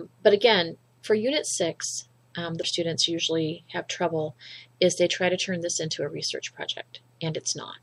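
The audio carries plainly audible codec damage throughout: weak high-frequency detail flickers in and out, giving a watery, swirly texture with softened attacks. The likely cause is MP3 compression at a low bitrate, consistent with roughly 64 kbps. From 2.60 to 2.64 s there is a brief glitch, characteristic of damaged data in a compressed stream. The decoder hit corrupted frames, lost sync, and resumed at the next valid frame header.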